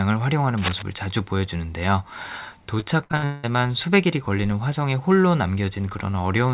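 From 0.57 to 0.82 s, a burst of cable scratch noise rasps over the speech, loud enough to sit only a few dB beneath it. It is likely a worn connector or lead being moved. Its dense, irregular crackle differs from a single click or steady hiss.

Between 2.8 and 3.45 s, repeated packet loss chops the speech into a robotic stutter. Five holes are patched by stretching the previous sound, covering about half the stretch, the longest near 186 ms. Unlike a single dropout, the choppiness recurs in quick succession. Nothing is heard above 4 kHz, matching the narrow telephone band of the call path.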